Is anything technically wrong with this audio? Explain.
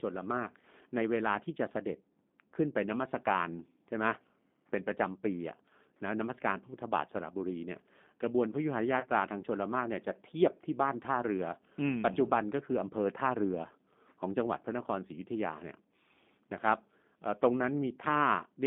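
Yes. The whole clip carries G.729 codec damage, and packet loss concealed by the speech codec occurs twice. The speech is band-limited to roughly 200 Hz to 3.6 kHz and has a rough, synthetic texture that is plainly audible. This fits an 8 kbit/s G.729A coder, which rebuilds each frame from a vocal tract filter, a pitch predictor and a few pulses.

From 9.00 to 9.07 s, and again from 12.14 to 12.17 s, VoIP packet loss concealed by the speech codec is audible. The decoder repeats its last pitch and filter at falling gain, so the speech smears into a fading buzzy tone or coloured noise. The first gap suggests about 30 ms of lost audio and the second about 10 ms.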